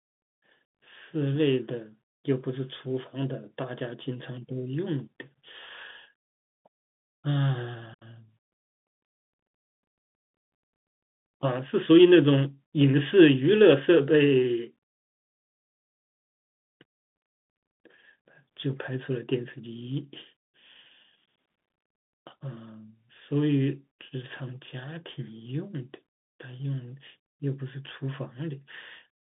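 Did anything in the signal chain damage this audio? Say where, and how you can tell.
Yes, at the codec: Bluetooth CVSD headset codec throughout. Spectrogram stops dead near 3.8 kHz; one-bit slope tracking leaves scratchy s sounds and granular hiss.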